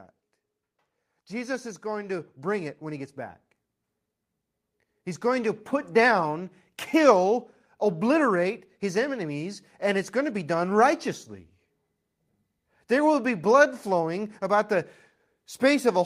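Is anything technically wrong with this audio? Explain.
Yes. From 1.11 to 3.45 s the automatic gain is rising: the control judged the input too quiet and lifted its gain by about 7 dB. The speech and the background noise swell together, which separates this from a talker moving closer, where only the voice would grow.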